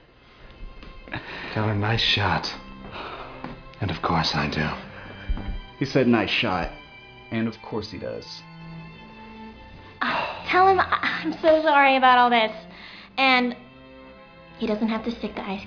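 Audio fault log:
No technical faults can be heard anywhere in the audio, which runs as one continuous, unbroken signal.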